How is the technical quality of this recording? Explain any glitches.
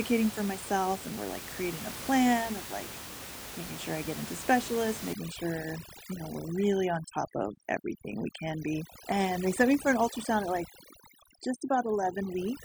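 The recording has one clear problem, overdone noise removal, which takes hold from 5.13 s, right after "I get into specialists", and lasts to the end. Before that, room noise sits about 12 dB below the speech. From 5.13 s, a noise reducer set far too aggressively drops any frequency band near its noise estimate, taking the softer parts of the voice along with the background noise. The background collapses to near silence sprinkled with twinkling specks. A spectrogram shows the smooth noise floor replaced by dark gaps with isolated bright dots, and the waveform's pauses become almost flat.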